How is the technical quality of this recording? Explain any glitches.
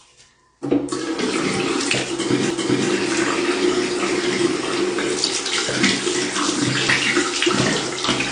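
Technical quality is compromised by two problems: band-limiting with coding damage throughout, and two brief skips.

Throughout, the audio carries plainly audible codec damage with nothing above 9.8 kHz. This is likely AAC compression, consistent with AAC-LC at around 32 kbps. Quantising the spectrum that coarsely lowers the bandwidth and degrades detail, giving a dull, smeared sound with a warbling texture.

At 2.51 s and again at 6.88 s there is a CD skip. In each case the pickup's laser has jumped to another turn of the disc's spiral, so the player mutes for only a few milliseconds and resumes from a different point. Each is heard as a tick followed by an abrupt discontinuity.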